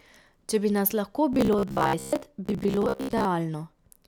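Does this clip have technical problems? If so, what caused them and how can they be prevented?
Yes. From 1.33 to 3.27 s, right after "bi nas lahko", the speech becomes a rigid, metallic buzz pitched near 66.7 Hz. This is robotic sound from repeated short buffers, likely caused by audio arriving too late, so about half of it was filled by looping a 15 ms chunk. Larger jitter buffers and more stable network or processing timing would prevent this.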